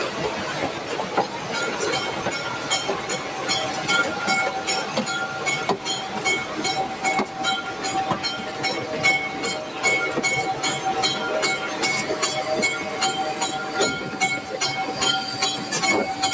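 A noise suppressor applied to music or sounds runs throughout, treating sustained tones and tails as noise and pulling them down by about 5 dB, so attacks pass while held material sinks and pumps. The call microphone path caps content at 8 kHz.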